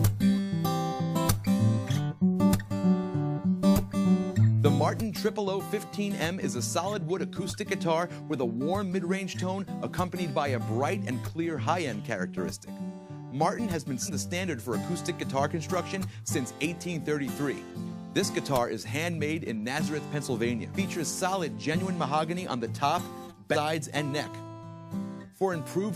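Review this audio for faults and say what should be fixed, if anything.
Whole compressed frames went missing or were rejected by the decoder as damaged, so playback lands on the next good frame and the audio skips forward. This happens three times with compressed frames skipped: at 14.05 s, about a fifth of a second is lost; at 20.74 s, roughly 0.7 s; at 23.52 s, about half a second. The jumps fit a frame length of about 46 ms. Prevent this by checking file integrity and transmission error handling so that every encoded frame reaches the decoder intact.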